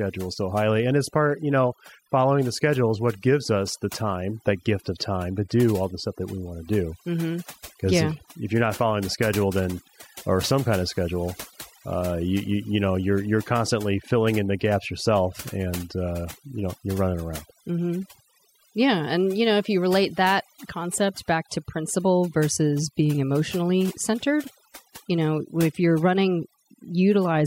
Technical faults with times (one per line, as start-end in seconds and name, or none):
0.00-27.46 overdone noise removal